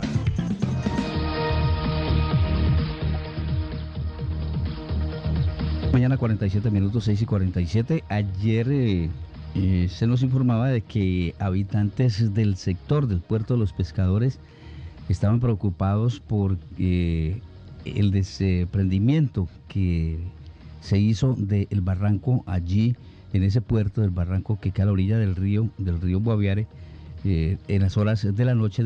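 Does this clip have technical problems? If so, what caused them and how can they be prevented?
No, no faults are audible.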